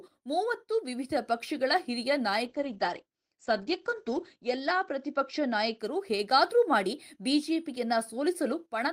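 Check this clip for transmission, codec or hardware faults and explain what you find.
One transmission fault: a call bitrate drop from 2.47 to 5.85 s. Bandwidth falls from 20 kHz to 8 kHz and the speech turns coarse, which fits the encoder going from about 32 to 11 kbps and holding the lowest rate for 1.57 s. It recovers before the clip ends.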